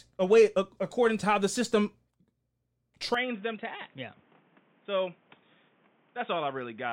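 A speech recording that changes character at 3.14 s and stays that way to the end. The sound turns dull and boxy, with nothing above about 3.7 kHz. It drops a few dB in level and gains a faint new noise floor. There is no gap at the change. The likely cause is an input switched to a poorer device.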